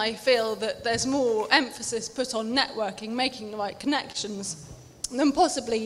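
Clock drift between sender and receiver runs through the whole clip: the sender's clock is slow by roughly 2 percent, so the receiver's buffer keeps draining. Unlike a single network hiccup, this produces a steady, one-directional pressure that never resolves, showing up as a faintly unsteady pace rather than one obvious glitch.

From 0.15 s to 5.85 s, repeated timing corrections compensate for that drift. The receiver repeatedly inserts tiny repeated pieces, all lengthening the sound, adding about 70 ms overall and pulling the pace to 99 percent. These are scattered, unevenly spaced slight hiccups, distinct from a stall because no single sound is held.

At 4.12 to 4.17 s a short stall from a late packet occurs: the buffer ran empty and the last sound was stretched for 25 ms until the data arrived, then playback resumed where it left off. Nothing is missing, which distinguishes it from a dropout; it sounds like one sound held too long, with a slight buzz or dip.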